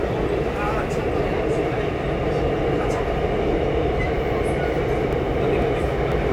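From about 5.13 s to 6.12 s there are periodic USB or driver dropouts: roughly three clicks, spaced 0.5 s apart. Each time, something stalls the USB bus or audio driver and a few milliseconds of sound are simply skipped, leaving a small jump in the waveform.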